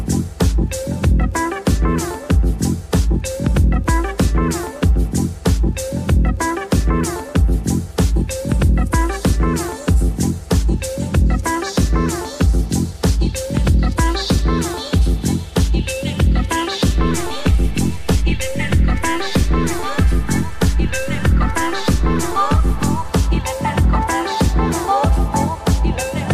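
There's a DC step at 16.98 s. The waveform's zero line jumps by about -24 dBFS, giving a low thump, holds there, then steps back at 23.09 s with a second thump. The sound itself rides through unchanged, which points to a converter recalibrating or an offset input being switched in.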